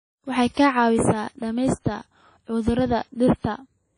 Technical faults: WMA compression

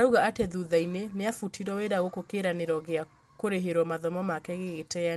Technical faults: clock drift between sender and receiver; repeated timing corrections

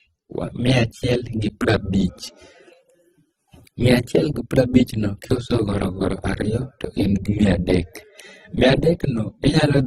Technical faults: transcoding between lossy codecs

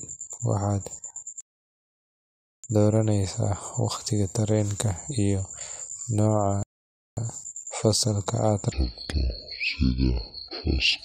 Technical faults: rebuffering stall; section at the wrong speed

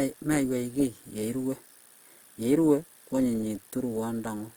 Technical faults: Opus compression

